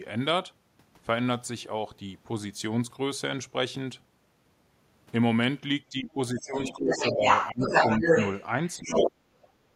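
From 5.9 to 6.57 s the speech dips by about 15 dB. This is speech suppressed in double talk. The echo canceller likely turned down both sides at once. From 6.38 to 6.74 s the other side's voice leaks through, about 10 dB under the talker. The canceller likely left part of the loudspeaker echo in the microphone. The speech dips again from 6.73 to 7.24 s. From 6.91 to 8.44 s the leaking voice grows to about 5 dB above the speech. A deeper dip of about 20 dB follows from 7.51 to 7.74 s. From 8.68 to 9.12 s the leak returns at about the talker's level, while the speech is suppressed again from 8.78 to 9.15 s.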